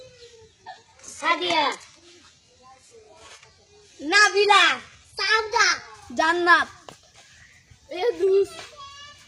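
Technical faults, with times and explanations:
0.0 to 6.0 s, adaptive stream starting at a low bitrate: the treble sounds synthetic, with nothing above 11.5 kHz and stronger codec artefacts, which fits a very low-bitrate HE-AAC version near 12 kbit/s. At 6.0 s quality jumps without a gap, consistent with a switch to AAC-LC around 96 kbit/s once the connection was measured.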